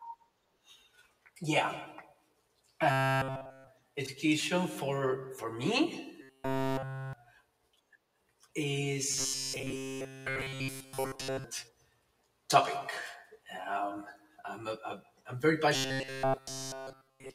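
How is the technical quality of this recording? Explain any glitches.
The speech is marred by robotic sound from repeated short buffers in four stretches: 2.91–3.67 s (ending just before "education for for"), 6.21–7.13 s, 9.12–11.44 s, and 15.75 s to the end, after "a a I'm very". Throughout each stretch the audio becomes a rigid metallic buzz at 133 Hz, likely from a roughly 7.5 ms fragment being replayed in place of missing audio. A spectrogram shows evenly spaced harmonic lines at 133 Hz, and the waveform repeats in near-identical short cycles.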